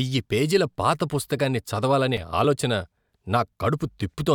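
At 1.11 s, between "పేజీల పాత" and "పుస్తకాన్ని చదవాలనే", a sharp tick cuts the speech, and another follows at 2.17 s after "చదవాలనే". Each is a 5 ms block of digital silence: the output buffer likely went unfilled, so the signal dropped abruptly to silence and back.

At 2.44 s, still after "చదవాలనే", a tiny forward skip comes with no gap. This is likely a dropped buffer (overrun): a few milliseconds of samples were overwritten before being read, and the two sides were joined directly.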